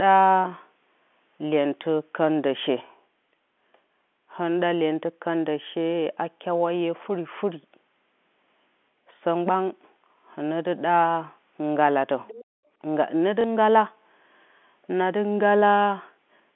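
From 12.27 to 12.45 s a faint second voice, well below the main speech, slips in; it is likely the other side's voice leaking through an imperfect echo canceller, unlike crosstalk, which would persist.

From 12.45 to 12.72 s the background is gated by the echo canceller: room sound drops by as much as about 40 dB for roughly a third of a second, then returns, rather than fading gradually like noise suppression.

At 13.41 to 13.44 s, a 30 ms gap filled by the last packet repeated gives a small blip, which fits one lost packet. It is a repeat, not a silent dropout.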